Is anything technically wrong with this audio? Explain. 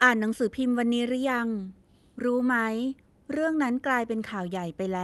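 No, nothing is technically wrong.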